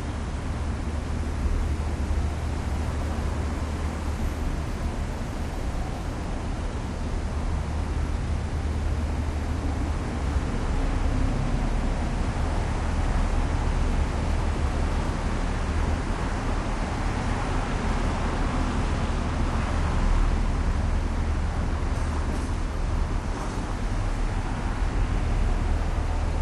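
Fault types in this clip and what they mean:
No fault types are present in this clip.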